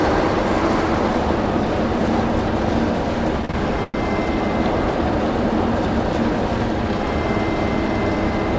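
From 3.42 to 3.96 s, repeated stalls (stutter) occur: the jitter buffer ran dry four times, and the receiver stretched the last sound to fill about 179 ms, a third of that span, with no audio lost. The longest hold lasts about 103 ms. It sounds dragged and hiccuping. On a spectrogram, the frozen stretches show as flat, smeared bands, sitting against the G.722 call path's empty region above 8 kHz. On the waveform, the longer holds show as repeated cycles that fade in level.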